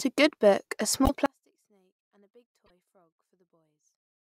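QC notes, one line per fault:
1.05–1.10 s and 2.65–2.70 s, broken MP3 bit reservoir: just after "book a", and again at 2.65 s, the sound jumps forward and a brief glitch replaces about 50 ms of audio. Each span is roughly two 24 ms frames. The likely cause is missing frames, so the next frames fetched their borrowed reservoir bits from the wrong data and decoded garbage until the stream caught up.
1.26 s to the end, one channel inverted: when played in mono the speech collapses into a faint trace, roughly 38 dB quieter. The likely cause is one channel switching polarity at 1.26 s, so the centred speech, which is identical in both channels, cancels when they are summed and only their small differences remain.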